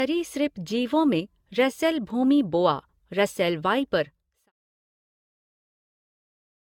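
Throughout the speech there is generation loss: a swirly, smeared, hollow quality with blurred consonant attacks, likely from roughly seven rounds of lossy re-encoding, consistent with AAC at 96 kbit/s. A spectrogram shows nothing above 17 kHz, patchy spectral holes and smeared transients. The smooth fade-out from about 4 s to 4.52 s tapers cleanly in the waveform.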